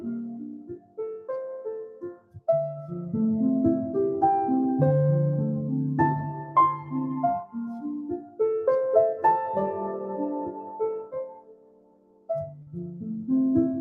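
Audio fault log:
Throughout: noise suppressor applied to music or sounds. A speech-tuned suppressor treats sustained tones, ambience and reverb as noise, so held material and tails sink and gain swings by about 15 dB. The audio pumps and thins. On a spectrogram, sustained partials fade while onsets stay bright.
0.30–0.99 s, 1.88–2.48 s, 7.77–8.40 s, 10.47–10.81 s, 11.00–12.30 s: sound cut by the noise suppressor. In these stretches steady and decaying sound is pushed down hardest, by up to about 19, 18, 14, 8 and 19 dB. Decays are cut short and attacks survive. The waveform envelope shows sudden troughs, and the spectrogram shows tails fading early.
12.62–12.67 s: short concealed packet loss. About 40 ms never arrived, and the decoder filled the gap by extending the preceding sound before crossfading back, which gives a brief smear or wobble. The spectrogram shows a short block of flattened, repeated texture, and the waveform a slightly regular patch.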